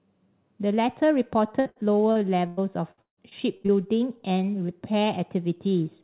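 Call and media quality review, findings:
Repeated packet loss (robotic sound), 1.6 to 3.70 s: choppy speech with pieces missing. About a quarter of that stretch is concealment, with gaps up to 157 ms. The jitter buffer keeps stretching the last audio over missing packets. The band tops out near 4 kHz, which fits narrowband G.711 mu-law at 64 kbps.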